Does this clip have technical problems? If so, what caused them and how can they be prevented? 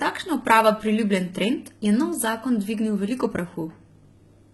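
Yes. Throughout the speech, sibilants sound gritty and metallic, likely from HE-AAC compression, where synthesized treble misaligns with real harmonics, which fits roughly 16 kbps. Prevent this with higher-bitrate AAC-LC encoding.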